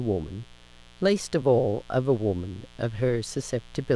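A mains buzz runs under the speech from start to finish: sharp 60 Hz switching spikes and their harmonics leaked in, giving a steady, raspy buzz roughly 30 dB below the speech.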